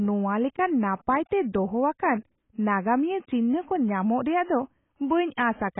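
Dull, muffled speech with nothing above about 3.8 kHz, and a watery, warbling smear on sustained sounds and sibilants that runs the whole way through. It is likely heavy AAC compression, with the missing top end and smeared detail pointing to AAC-LC at roughly 16 kbps.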